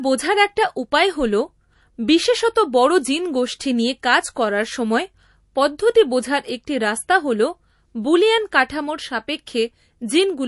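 From start to finish the speech sits behind a hard ceiling, with nothing at all above 11.3 kHz, and the whole thing has that watery, swirly quality where quiet detail flickers in and out. That's most likely MP3 compression run short on bits, and the damage sounds like something around 48 kbps. The encoder chops the treble at a fixed point and keeps switching weak frequency lines on and off frame to frame, so the s sounds come out chirpy and the edges of sounds get smeared.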